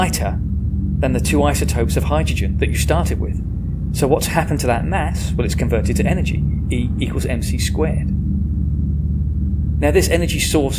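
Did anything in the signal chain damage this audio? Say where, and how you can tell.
No, no stage in the chain audibly damaged this audio.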